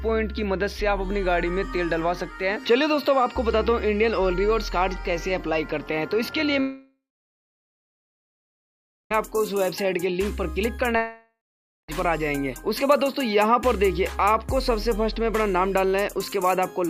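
The audio cuts out twice, from 6.60 to 9.15 s and from 10.97 to 11.89 s. Each time a fading buzzy tail gives way to silence (about 2.1 s, then 0.53 s), and the sound resumes with roughly 2.5 s and 0.92 s missing. This is likely a long network dropout.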